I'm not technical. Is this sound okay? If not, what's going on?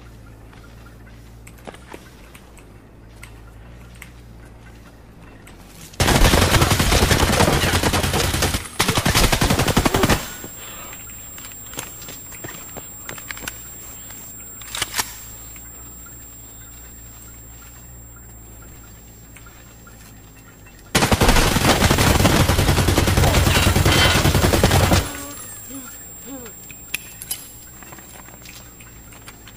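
No. There are two brief glitches, at 18.68 to 18.76 s and at 25.6 to 25.68 s, caused by chunks out of order. At each one, two consecutive 40 ms slices of sound play in swapped order, so the later slice comes first. Nothing is missing, but the sound jumps forward, then back, then forward again, giving a quick jumbled stutter.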